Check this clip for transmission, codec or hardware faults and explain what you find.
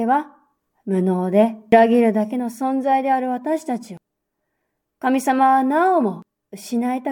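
Three skips break this speech, at 1.72, 3.97 and 6.22 s. They are audio missing between chunks. The recorder likely processes the signal in 2.5-second blocks and drops around 300 ms at each handover, so the speech jumps forward abruptly at evenly spaced points, joined directly without any gap of silence.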